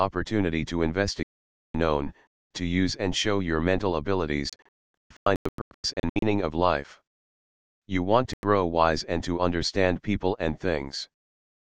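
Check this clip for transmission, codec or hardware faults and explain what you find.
Digital broadcast dropouts occur three times, at 1.24 to 1.75 s, in scattered holes from 4.50 to 6.23 s, and briefly at 8.34 s. The receiver lost valid frames and muted until clean data returned. The sound cuts abruptly to silence and then resumes further on. The first gap lasts about half a second. The middle stretch loses 1.12 s in total across 1.73 s, with no single hole longer than 0.26 s. The last gap is about 0.1 s. A waveform shows flat-line gaps with sharp edges, and a spectrogram shows blank vertical bands across all frequencies.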